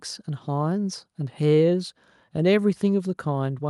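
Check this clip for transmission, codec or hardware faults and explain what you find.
Nothing in the speech recording points to a transmission, codec or hardware fault.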